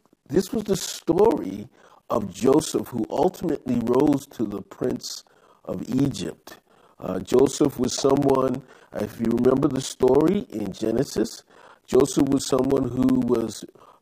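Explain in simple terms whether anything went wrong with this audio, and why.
Periodic USB or driver dropouts run from 0.10 s to 13.93 s. Every 64 ms, something briefly stalls the audio connection, and around 10 ms of speech turns to silence. The result is a steady rapid ticking, a couple of hundred times, heard over the speech.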